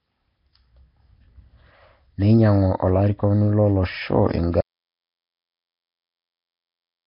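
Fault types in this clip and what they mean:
Nellymoser compression: likely the old Flash microphone codec, heavily applied; speech sounds rough and hissy, and the spectrogram shows nothing above 5.3 kHz.
Audio dropout to silence: likely lost input; from 4.61 s to the end the sound cuts out, leaving complete silence without room tone.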